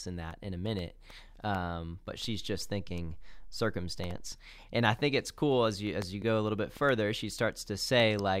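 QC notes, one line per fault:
2.25–4.32 s, DC step: the waveform's zero line jumps by about -41 dBFS at 2.25 s, holds there, then drops back at 4.32 s, so two soft low thumps mark the edges while the speech between carries on unchanged. Unlike a click or dropout, nothing in the speech is lost or smeared. Unlike low-frequency hum or rumble, there is no continuous tone between the thumps, just a silent shifted baseline.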